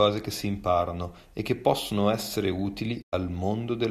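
At 3.01 s, just after "e che possono essere", a digital broadcast dropout mutes the speech: corrupted frames, which fits about four being lost, make the receiver fade out over 20 ms and stay silent until 3.14 s. The waveform shows a short ramp to a flat gap, and the spectrogram a blank vertical band.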